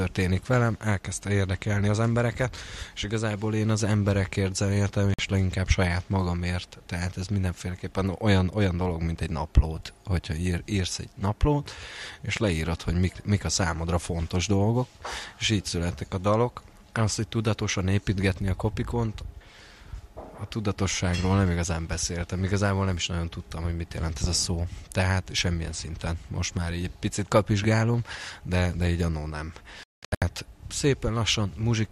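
Digital broadcast dropouts at 5.14 s and from 29.83 to 30.22 s leave the audio muted while the receiver waits for valid frames. The first hole is about 48 ms, consistent with two lost 24 ms frames. The second scatters 336 ms of silence across 384 ms, longest gap 192 ms.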